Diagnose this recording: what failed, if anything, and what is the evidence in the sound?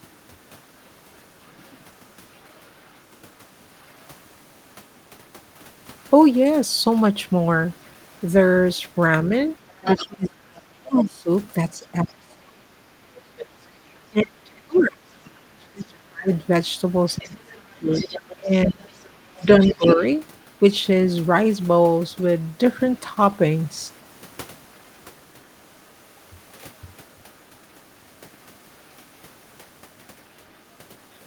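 The other side's voice is leaking through in five stretches: 0.14–5.09 s, 7.85–10.61 s, 13.65–21.15 s, 22.92–23.35 s and 25.43–30.63 s. Most of it sits way down, around 35 to 40 dB under the talker. The 7.85–10.61 s and 13.65–21.15 s patches are much more obvious, only about 10 to 15 dB below. It's call processing: the far end coming out of the loudspeaker back into the mic, likely because the echo canceller didn't fully remove it.

Speech is also suppressed in double talk between 9.97 and 20.02 s, overlapping those louder leak stretches. When both sides talk at once, the talker's voice gets pulled down, by about 30 dB at the deepest point, and the dips add up to roughly 7 s. Same stage, call processing. The likely cause is that the echo canceller couldn't tell its own talker from the loudspeaker echo, so it turned down both.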